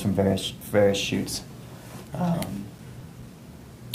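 From 2.57 to 3.44 s there is a short burst of CD scratch ticks: five brief ticks, the longest lasting only a few milliseconds, spaced evenly at roughly six per second. A blemish on the disc corrupts more data than error correction can repair each time it passes the laser, so the player patches or mutes those samples. The even spacing, locked to the disc's rotation, separates this from the random timing of vinyl crackle or digital clicks.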